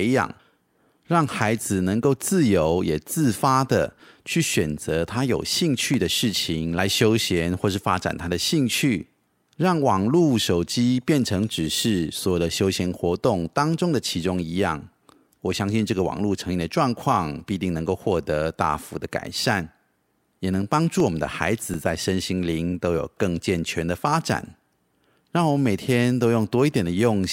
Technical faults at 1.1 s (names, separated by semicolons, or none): none